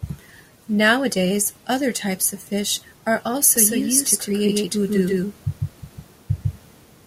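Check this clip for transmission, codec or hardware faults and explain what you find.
One fault is present. From 3.56 s, right after "of fish are also", a doubled audio track appears and lasts to the end. A second full-band copy, about as loud, trails roughly 150 ms behind with no decay, likely from an out-of-step edit or slower capture path. It sounds like a dry slap echo, and waveforms and spectrograms show every onset repeated.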